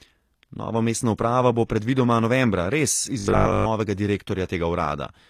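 All the way through, the treble sounds rebuilt rather than real. Nothing reaches past 15 kHz, and the s sounds have that metallic, lispy edge. The codec damage is plainly audible, and it's likely HE-AAC compression at a low bitrate, around 24 kbps, with spectral band replication faking the top end.

From 3.20 to 3.68 s the speech collapses into a rigid 50 Hz buzz, a robotic sound from repeated short buffers. It's likely the playback repeating roughly 20 ms chunks while fresh audio was skipped, so most of that stretch is copies rather than the real signal.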